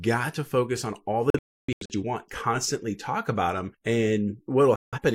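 Digital broadcast dropout at 1.30 to 1.95 s, after "to focus on all" and before "you want constantly talk", and again at 4.76 to 4.99 s in this speech clip: the receiver lost frames and muted, leaving scattered holes totalling 469 ms, longest 299 ms, then a 171 ms gap.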